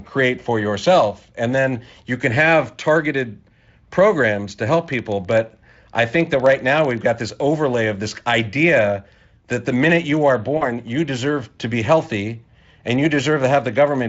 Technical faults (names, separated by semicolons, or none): periodic USB or driver dropouts; VoIP packet loss concealed by the speech codec